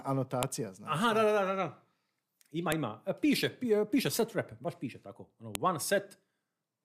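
Separate WAV pieces were joined without stripping their headers, so header bytes play as samples: a file header played as audio, heard as sharp, loud clicks at 0.43, 2.72 and 5.55 s in the speech.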